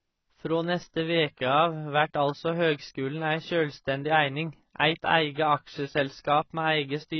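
From start to end the speech has nothing above 6 kHz and sounds dull and smeared, with a watery, warbling fizz on sibilants and held sounds. That texture marks heavy AAC compression rather than a plain low-pass filter. The likely cause is AAC-LC at a bitrate that points to about 16 kbps.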